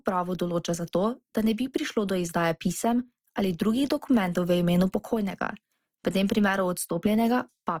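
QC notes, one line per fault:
throughout, Opus compression: speech is grainy and rough rather than swirly like MP3, as starved bands get noise-filled; likely CELT-mode Opus, fitting about 24 kbps.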